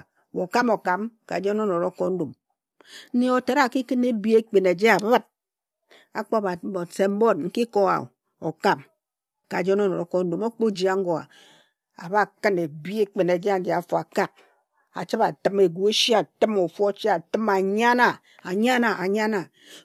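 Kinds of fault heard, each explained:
No technical fault can be heard anywhere in this speech recording.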